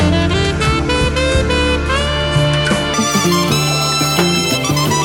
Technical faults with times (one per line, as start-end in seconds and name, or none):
2.94-5.05 wrong sample rate